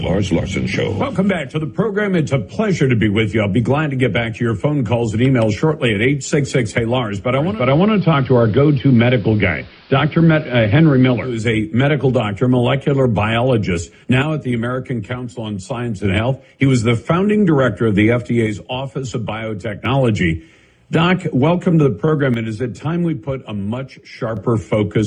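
A hybrid receiver lost its digital signal and made a digital radio blend to analogue, cross-fading over about 344 ms to the AM broadcast from 7.32 s to 11.53 s. Hiss sits roughly 30 dB under the audio, and the level shifts by about 1 dB. The sound drops abruptly by about 6 dB from 14.22 to 16.05 s, 18.47 to 19.85 s and 22.34 to 24.37 s, likely because one channel drops out before the stereo pair is summed to mono, halving the shared content and losing anything carried only on that side.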